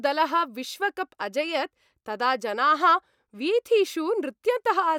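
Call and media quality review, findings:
No audible faults found; the speech signal shows no defects at any point in the recording.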